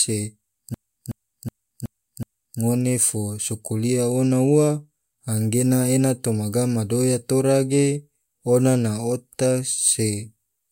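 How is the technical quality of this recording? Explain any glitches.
A system hang loop disrupts the recording from 0.74 s to 2.60 s. The computer or audio driver stalled while the sound hardware kept replaying the same ring buffer. A 0.37 s slice of the speech repeats exactly five times at about 2.7 Hz, which fits a 16384-sample buffer. The result is a rhythmic, mechanical stutter of one identical fragment. When playback resumes, the speech picks up with essentially nothing skipped.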